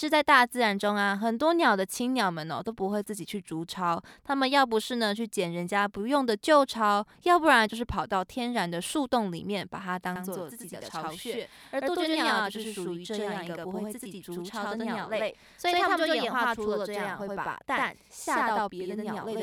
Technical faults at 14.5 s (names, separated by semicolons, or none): channel delay (doubling)